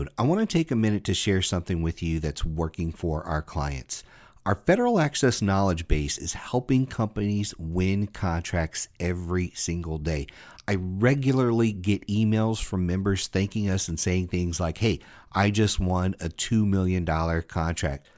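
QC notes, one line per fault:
Nothing to flag here, as the speech runs along without a single problem worth noting.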